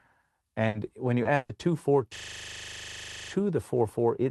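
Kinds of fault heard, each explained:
Burst of packet loss: A held buzz or fading hiss replaces the audio near 0.7 s before "when you" and at 1.35 to 1.52 s, as the receiver stretches the last sound over the missing packets.
Lost packet rebuilt from error correction: Brief rough, noisier patches at 0.73, 1.25 and 1.49 s. Each is a 20 ms low-bitrate Opus copy carried in the following packet.
Short concealed packet loss: A quick smear right after "when you" at 1.23 s, where the decoder continued the last sound for 20 ms to cover a late packet, then blended back.
System hang loop: From 2.16 to 3.32 s, a 40 ms slice repeats exactly 29 times as a rattling 25 Hz buzz while the frozen system leaves the hardware cycling its buffer.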